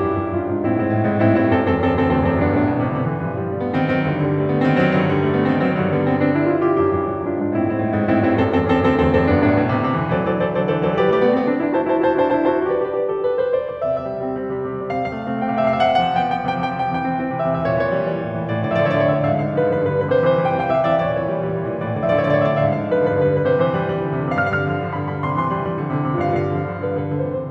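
From start to end, the music carries a doubled audio track. A second, full-band copy trails the first by around a sixth of a second, at about the same level. Every attack is heard twice, as a hard slapback with no decay and no room colour. The copy never fades or changes. The likely cause is the same signal reaching the mix twice, once through a slower path, so two identical tracks sit out of step.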